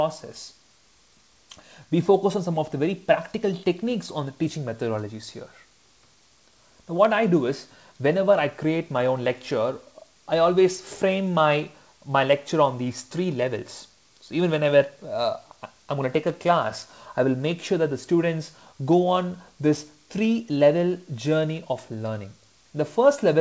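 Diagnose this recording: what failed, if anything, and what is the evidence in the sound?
Nothing has failed: the signal arrives intact over a call path, with a wideband codec consistent with G.722 limiting the bandwidth so that nothing is present above 8 kHz.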